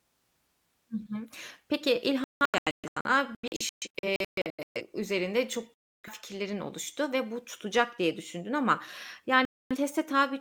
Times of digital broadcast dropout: 2.24-4.81, 5.74-6.09, 9.45-9.77

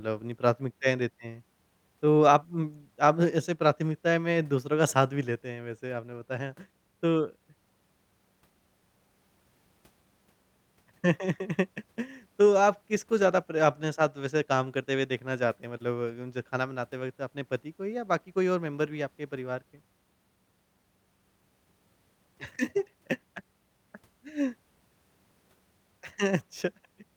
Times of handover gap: none

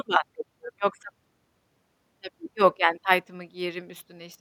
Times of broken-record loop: none

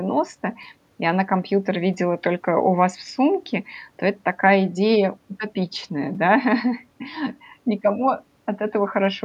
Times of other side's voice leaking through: none

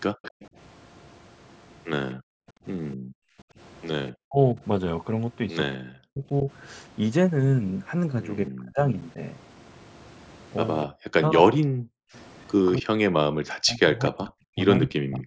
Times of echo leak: 0.23-0.47, 4.08-4.12, 14.81-14.86

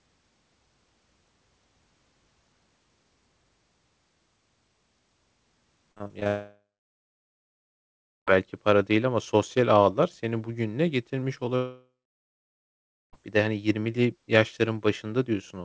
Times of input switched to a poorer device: none

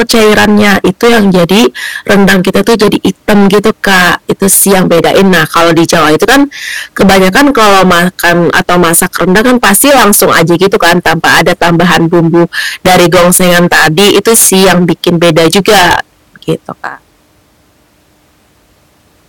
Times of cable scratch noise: none

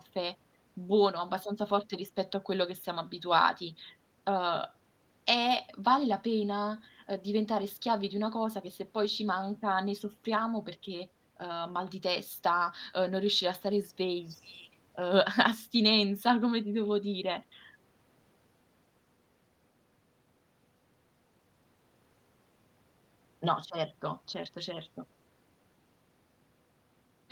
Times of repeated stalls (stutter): none

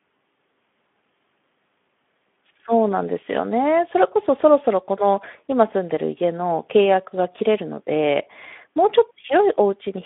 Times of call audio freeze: none

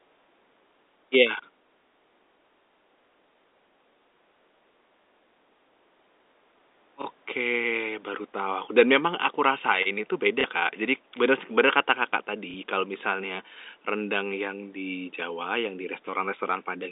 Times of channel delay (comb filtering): none

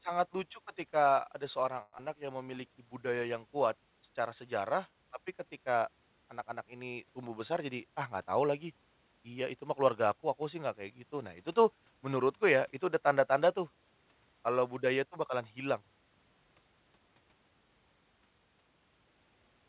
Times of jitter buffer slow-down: 2.19-2.56

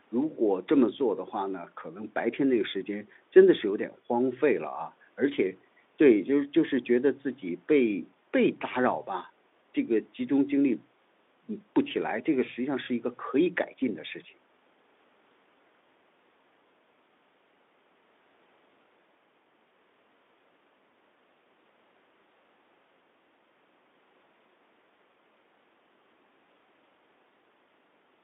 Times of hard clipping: none

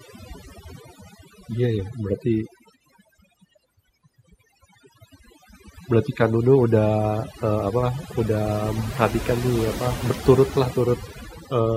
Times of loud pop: none

